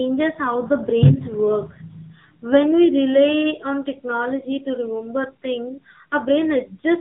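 Speech runs through an AMR narrowband mobile codec for the whole clip, with plainly audible buzzy, synthetic coloring that fits a low mode near 7.4 kbps. On a spectrogram everything stops at a flat 4 kHz ceiling, leaving the upper bands empty throughout.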